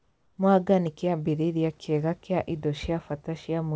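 From 0.00 to 0.38 s the sender likely stopped transmitting in a pause, leaving the receiver to fill the gap with comfort noise in place of the background. The room's real hiss becomes a steady, featureless noise about 3 dB quieter until the speech starts.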